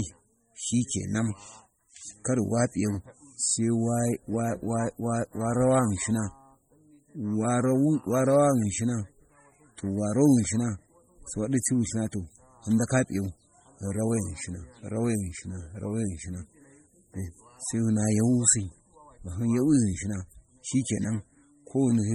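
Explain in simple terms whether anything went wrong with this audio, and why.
The speech sounds watery and swirly all the way through, with chirpy s sounds. The likely cause is heavy MP3 compression, which drops quiet details to save data.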